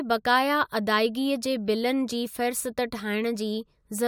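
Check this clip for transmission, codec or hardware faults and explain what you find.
Checking this speech clip turns up no faults to explain.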